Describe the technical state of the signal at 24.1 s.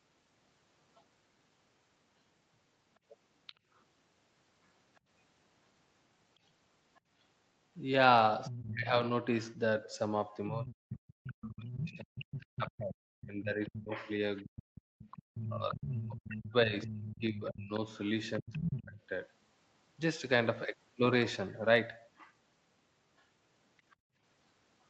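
Background gated by the echo canceller, from 23.96 to 24.17 s, so 24.1 s falls inside it. While the far-end loudspeaker signal was active, the echo canceller clamped down on the microphone, treating the pickup as echo. The room sound behind the speech sinks by up to about 31 dB, leaving a brief hole of roughly a fifth of a second before the ambience comes back as the canceller releases, with the call-style band reaching nothing above 8 kHz.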